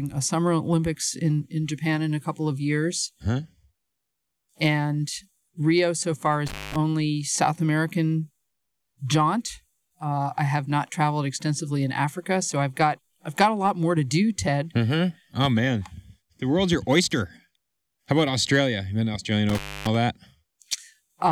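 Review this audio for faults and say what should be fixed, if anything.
Intermittent contact at 6.47–6.76 s, just after "so far", and at 19.49–19.95 s. A loose cable or plug briefly opens, cutting the speech for about 0.19 s and 0.27 s, with crackle at each break and faint hiss during the gaps. Reseat or replace the suspect cable and connectors, and secure them with strain relief.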